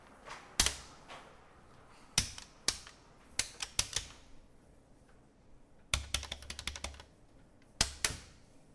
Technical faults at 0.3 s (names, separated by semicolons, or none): none